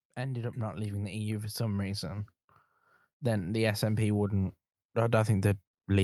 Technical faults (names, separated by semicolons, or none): automatic gain rising